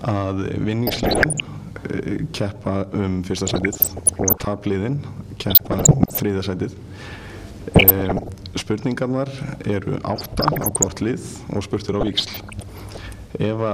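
Weak DAB reception let bit errors, around one percent, slip past error correction into the MP2 data, so corrupted scale factors threw single sub-bands up or down in level frame by frame. The result is DAB burbling, short blips of noise and level jumps in single sub-bands over the audio at 0.87–1.40 s, 3.47–4.47 s, 5.48–6.20 s, 7.72–8.29 s, 10.16–10.83 s and 12.01–12.97 s.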